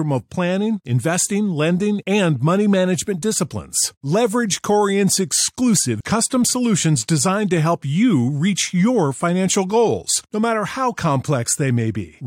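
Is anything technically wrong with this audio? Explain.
Yes. A stream segment skipped at 5.99 s: a piece of the speech is missing there, and the audio jumps abruptly forward with a brief blip at the join. The likely cause is a segmented stream where one segment failed to load and playback resumed at the next.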